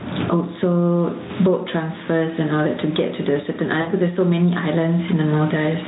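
A short speech clip with gain pumping all the way through: loud and soft parts are squashed closer together in level, with a swing of around 15 dB, likely from a fast limiter fighting a mic gain set far too high. At 3.82 to 3.89 s there's VoIP packet loss concealed by the speech codec: roughly 60 ms went missing, and the decoder filled it with a fading stretch of the previous sound that stays weak for a moment afterwards.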